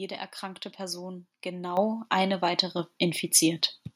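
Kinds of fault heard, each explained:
Microphone volume stepped up: the call software judged the microphone input too quiet and raised the device's input gain in a single jump. The level increase hits everything in the signal at once, so the speech and the background noise become louder together. Here the gain rises by about 9 dB at 1.77 s, then by a further step of about 4 dB at 2.79 s, leaving the later speech clearly louder than the opening.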